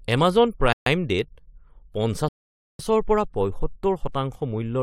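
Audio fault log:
0.73–0.86 s, playback stall: The speech drops out in mid-flow for about 135 ms and then carries on, leaving a short, abrupt hole rather than a fade. The likely cause is the player briefly running dry or its output thread being held up, so no samples reached the output until it recovered. The gap is brief enough to sound like a hiccup in delivery, yet clearly unnatural because it interrupts sound rather than falling at a pause.
2.28–2.79 s, rebuffering stall: The speech cuts to silence for about 510 ms and then resumes exactly where it left off, so nothing is missing but the timeline is stretched by that half second. This happens when the player exhausts its downloaded audio and must wait for more data before continuing. Because playback picks up at the same point, the effect is a frozen moment inserted into the flow rather than a skip.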